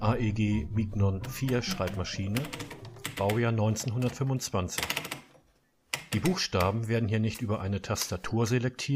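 Nothing stood out as a technical problem on listening.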